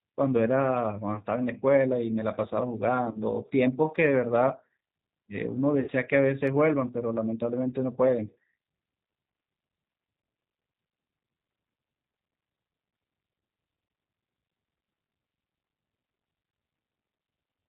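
Throughout, the G.729 codec at 8 kbit/s rebuilds the speech from a filter and sparse pulses, leaving it plainly rough and synthetic. On a spectrogram, nothing appears above 4 kHz.

VoIP packet loss concealed by the speech codec occurs at 1.15 to 1.21 s, 3.11 to 3.19 s and 5.80 to 5.91 s. The decoder stretches the preceding sound across about 10, 30 and 70 ms of missing audio. Each gap becomes a buzzy tone or coloured noise that fades, seen as a decaying waveform envelope.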